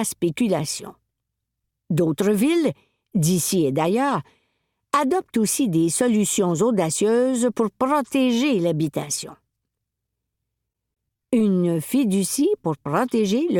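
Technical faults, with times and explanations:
10.68 to 11.41 s, repeated packet loss (robotic sound): the audio turns choppy for about three quarters of a second, with small pieces dropping out in quick succession. Around a dozen short holes, none longer than about 20 ms, open up in this stretch. Each is filled by stretching the sound just before it, so roughly a fifth of the span, about 140 ms, is patched-over repetition.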